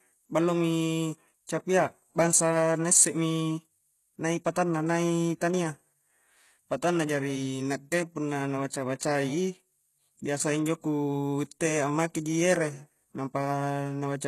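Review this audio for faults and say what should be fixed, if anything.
Throughout the speech, the s sounds come out gritty and metallic, almost lisped, and the treble has a synthetic sheen, with nothing at all above 12.3 kHz. This is likely HE-AAC compression: the codec spends its bits only on the lower spectrum and rebuilds the upper range by copying lower bands upward under a coarse envelope, so the rebuilt harmonics don't align with the real ones. The damage is plainly audible and fits a bitrate near 16 kbps. To prevent it, encode at a much higher bitrate or use a full-band codec such as AAC-LC instead of relying on band replication.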